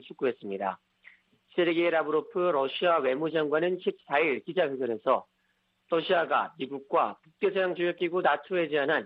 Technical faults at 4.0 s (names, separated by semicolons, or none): gap between chunks